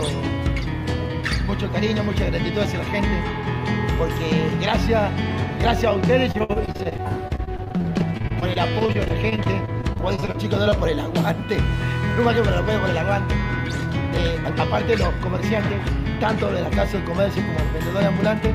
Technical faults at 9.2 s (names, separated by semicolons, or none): repeated packet loss (robotic sound)